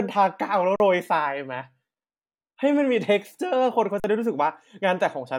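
At 0.76 to 0.80 s and again at 4.00 to 4.04 s, the speech drops into an underrun with held sample. The output buffer empties, and the converter holds its last value for 40 ms, leaving a flat, silent stretch. About 40 ms of audio is lost each time.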